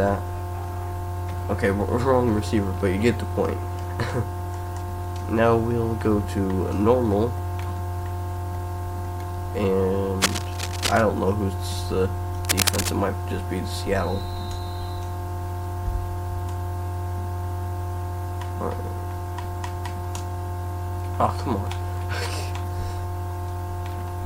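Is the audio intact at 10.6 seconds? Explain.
No, a dense, uneven scratching rustle sits over the sound from 10.22 to 11.03 s, only slightly below the signal: cable scratch noise, likely a worn cable or connector shifting its contact resistance.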